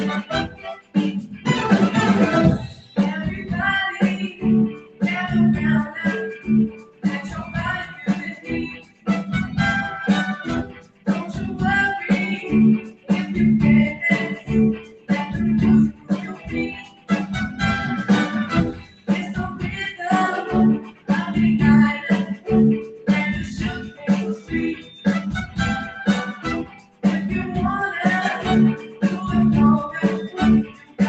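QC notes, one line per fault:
throughout: noise suppressor applied to music or sounds. The level pumps and flutters, and sustained material thins out, swinging by about 10 dB. A speech-tuned suppressor keeps treating steady tones, ambience and reverb as noise and turns them down while attacks slip through.
0.48–9.08 s, 10.64–11.08 s, 12.81–27.04 s, 28.78–31.0 s: sound cut by the noise suppressor. Held and decaying sound sinks by up to about 15 dB and tails stop short, for roughly 3 s, 0.4 s, 4 s and 0.7 s within these spans. The suppressor misjudges that sound as noise.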